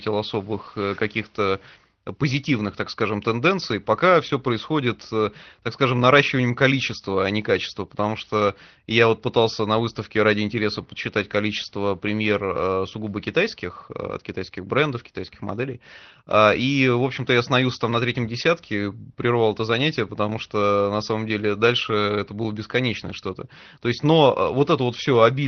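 Listening closely to this speech recording, nothing stood out as a technical problem at any point.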